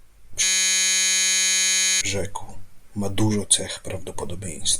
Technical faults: system hang loop

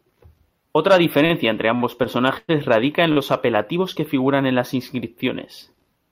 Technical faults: short stall from a late packet

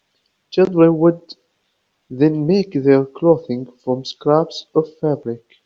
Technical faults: none

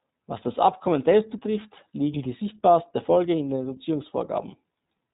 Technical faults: iLBC codec

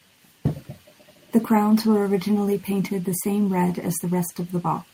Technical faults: none

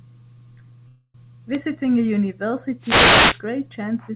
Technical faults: call audio freeze; wireless microphone noise hit

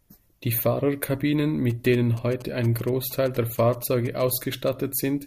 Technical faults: GSM signalling bursts

